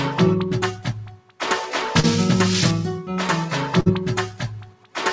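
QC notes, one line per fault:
Throughout: noise suppressor applied to music or sounds. The level pumps and thins as sustained parts and decays repeatedly sink while onsets stay fairly intact, with the swing between kept and lowered passages of around 15 dB. A suppressor tuned for speech is treating steady tones, ambience and tails as background noise and attenuating them. Above it, the wideband call path leaves nothing above 8 kHz, a dull top consistent with a G.722-class codec.
0.72–1.41 s and 4.26–4.97 s: sound cut by the noise suppressor. In each span, roughly 0.7 s of sound sags markedly, dipping by about 16 dB at its deepest, so held material fades away and its decay ends early instead of ringing out. The suppressor has classified these stretches as noise and pulled them down harder than the surrounding audio, while anything abrupt within them passes more readily.
2.00–2.06 s: short concealed packet loss. 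A brief smear interrupts the flow, about 34 ms of the preceding sound stretched forward before a blend back into the real signal, with around 30 ms of original audio simply gone. The packet carrying that slice arrived too late for the decoder, so the receiver extrapolated from what it last had to hide the hole rather than leave silence.
3.80–3.89 s: burst of packet loss. A longer dropout gives about 54 ms of held, fading continuation of the last sound, after which playback resumes with around 60 ms of material skipped, so the audio jumps ahead. Several consecutive packets failed to arrive in time; the concealment kept repeating the final sound while lowering it, then gave way when real data returned.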